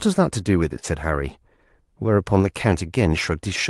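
From 0.79 to 0.86 s, short concealed packet loss: 40 ms went missing and 35 ms was filled by extending prior sound, smearing briefly.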